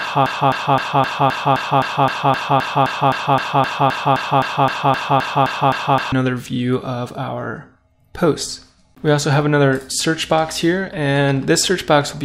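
From the first instant, the audio is stuck in a broken-record loop: a 0.26 s fragment repeats back to back, 23 times, until 6.12 s, and only then does the sound move on. The loop is already running when the clip begins, and whatever should have played during those six seconds is gone. Unlike an echo, each repeat is identical and never fades. Unlike dropouts, there are no silent gaps. The likely cause is a player, encoder or stream that stalled and kept resending its last buffered fragment.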